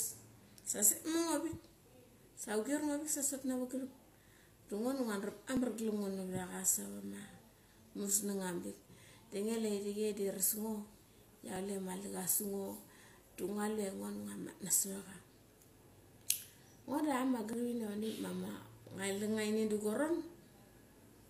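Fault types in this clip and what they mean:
Overlap between stream segments: overlapping timestamps at each 6 s segment joint get trimmed, so 20 to 40 ms of speech vanishes in a tiny skip.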